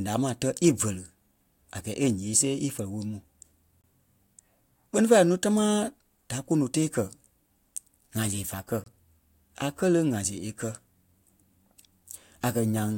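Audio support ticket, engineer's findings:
Gap between chunks, speech. Short dropout, about 25 ms of silence, 3.81–3.84 s. Content intact on either side, just pushed apart. Boundary on the chunked transport/playback path.

Second occurrence 8.84–8.86 s, right after "fá kɛ̀". Same 25 ms length. Spacing of about 5.03 s between holes matches a fixed 5 s chunk size plus the gap; silence inserted at each join rather than samples lost.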